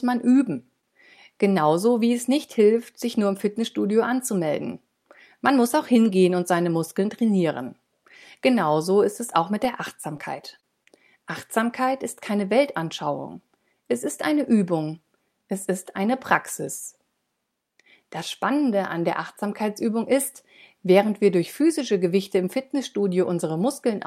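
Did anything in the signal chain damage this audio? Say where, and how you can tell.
Yes, in the network path. There are short stalls from late packets at 0.81 and 10.84 s: the jitter buffer ran dry, so sound is held about 20 ms, then resumes.

Three short concealed packet losses occur at 10.01, 10.17 and 10.60 s. About 20 ms each never arrived, and the decoder bridged each gap by extending the previous sound, leaving brief smears.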